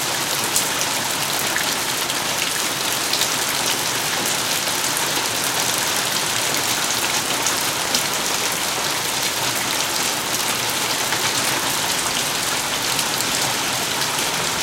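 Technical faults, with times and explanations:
2.22–2.24 s and 7.85–7.87 s, loud pop: A single sharp pop sits on top of the sound each time, peaking about 10 dB above it. The sound carries on underneath. A sudden voltage pulse, likely from a switch, plug or static discharge, was added to the signal.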